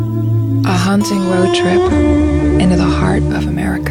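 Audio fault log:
0.97–3.68 s, digital radio blending to analogue: the receiver loses its digital stream and cross-fades over about 477 ms to the station's FM broadcast, then returns to digital at the end of the range. The level shifts by about 2 dB, and a steady hiss sits roughly 35 dB below the signal, as FM reception noise replaces the digital path's silence.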